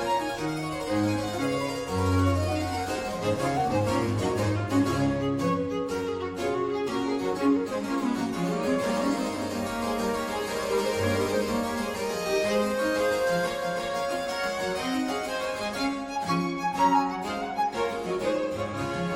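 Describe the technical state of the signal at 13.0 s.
At 13.0 s a steady hiss sits roughly 25 dB under the signal, and the level is shifted by about 1 dB. This is digital radio blending to analogue FM, spanning 9.24 to 13.87 s, reached through a 414 ms cross-fade.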